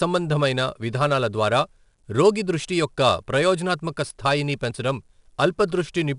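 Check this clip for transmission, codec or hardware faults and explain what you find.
One codec fault is present, and it runs through the whole clip: 4-bit ADPCM compression. Each speech sample is stored as a coarse 4-bit step from a predicted value, so a gritty hiss rises and falls with loudness on every strong syllable, and sharp onsets distort where the step size lags behind. Nothing reaches above 10.6 kHz, which points to a reduced sample rate and a stream of about 89 kbps. Unlike perceptual codecs, there is no warbling or smeared tone, only broadband grit that tracks the level.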